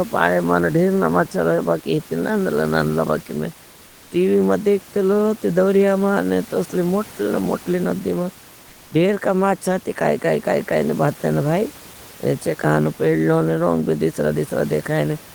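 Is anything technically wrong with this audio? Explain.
Yes. Between 3.87 and 4.11 s, after "नांदला नांदला बागे में" and before "टीवी मां देखते लो", the room noise (about 25 dB below the speech) is replaced for 240 ms by comfort noise in place of the background. This is likely discontinuous transmission, which points to Opus DTX, filling the pause with steady, featureless noise. Unlike a dropout or gate, there is no silence: the level dips only about 1 dB.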